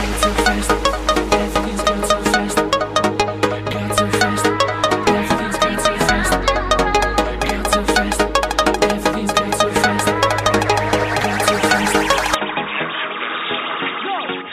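An input switched to a poorer device at 12.35 s, and the audio stays that way to the end at 14.52 s. With no gap, the sound turns dull and narrow, with nothing above 3.8 kHz, drops a few decibels in level, and picks up a faint new background noise well below the signal. This is likely a change to a different microphone or a headset's call profile.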